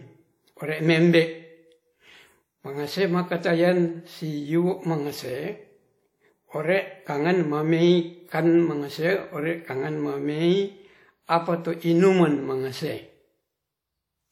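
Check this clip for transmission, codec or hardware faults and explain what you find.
The speech carries a ringing, washy smear throughout, with a hiss that swells and fades along with the voice, and nothing is present above 17.9 kHz. This is likely WMA compression. A transform codec working in long blocks spreads its quantisation error across tens of milliseconds around each sound and discards weak spectral detail outright. The damage is plainly audible, which fits a low bitrate of around 48 kbps.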